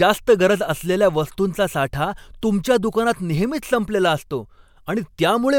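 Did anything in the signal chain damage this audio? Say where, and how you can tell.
Yes. The codec stage caused pre-echo. At 2.41 s an attack has a short hiss, about 16 dB above the quiet, smeared 15 ms ahead of it. Noise sized for the loud attack fills its whole transform block. That fits a 26 ms block without short-block switching.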